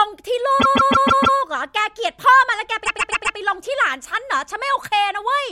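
Speech in which a run of compressed frames was sent or written more than once, the fault known as repeated frames, so the decoder plays the same fraction of a second over again. From 0.59 to 1.37 s a 156.7 ms block plays five extra times, and from 2.84 to 3.36 s a 130.6 ms block plays four extra times. Each sounds like a mechanical stutter and lengthens the audio, by 783.7 ms and 522.4 ms respectively.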